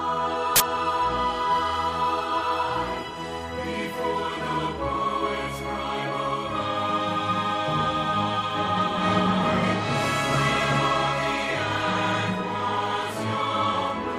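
At 0.56 to 0.60 s, file tags played as audio: an embedded cover picture's compressed bytes are decoded as samples, giving a 40 ms burst of very loud white noise. The waveform shows a solid slab with hard edges; the spectrogram, a broadband vertical block.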